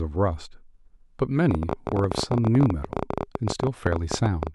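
A train of clicks runs from 1.51 to 4.48 s: around fifty similar pulses at an uneven 17.2 per second, well above the speech, likely from electrical interference.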